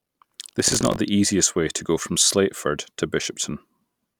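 Until 0.96 s, before "the easiest way to", buffer tearing splices stale audio into each period, giving a robotic 46.9 Hz buzz that fits a 1024-sample buffer.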